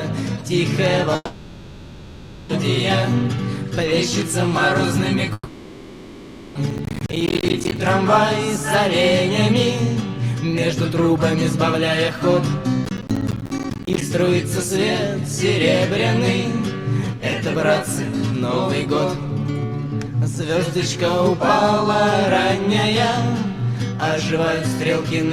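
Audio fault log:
1.15 to 2.50 s and 5.33 to 6.56 s: long network dropout, likely cause; about 1.3 s and 1.2 s lost, concealment fades to near-silence, waveform flattening before the sound resumes.
6.71 to 7.77 s and 12.85 to 14.01 s: processor overload crackle; around forty missed buffers of roughly 10 ms leave hard-edged silent gaps, seen as vertical spectrogram streaks and waveform notches.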